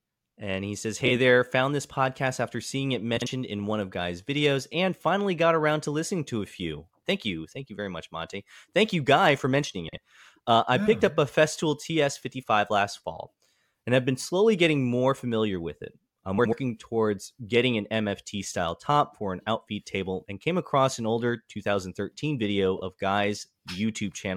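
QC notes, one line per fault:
1.06–1.10, 3.17–3.27 (after "podcast after seeing it"), 9.88–9.98, 16.38–16.53 (before "towards getting an"), 22.76–22.82: frames out of order. Adjacent blocks of about 23, 46 or 70 ms play swapped, giving a brief garbled flutter. Unlike a dropout or repeat, nothing is lost or added.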